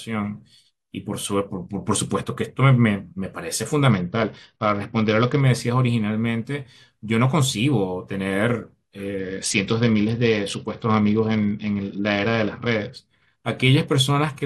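Speech, with a Bluetooth SBC bit pool drop from 3.90 to 5.41 s and again from 9.19 to 12.97 s. The treble dulls and gritty noise rises, which fits the bit pool falling from about 31 to 8, near 66 kbps, as a congested link starves the upper sub-bands.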